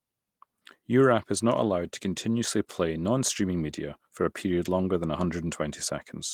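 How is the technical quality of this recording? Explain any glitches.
There are no glitches in this speech recording. The Opus voice compression leaves only light traces, and the full audio band is kept, consistent with a hybrid mode at around 20 kbps.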